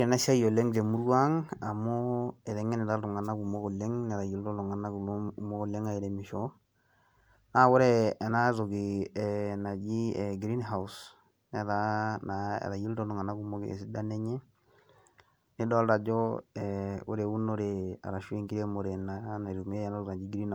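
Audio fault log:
Throughout: generation loss. The speech sounds swirly, smeared and hollow, more degraded than one pass at 128 kbit/s would explain. Consonant attacks blur. This fits MP3 re-encoded around four times. Each pass likely requantised on a shifted frame grid, stacking noise and spectral holes.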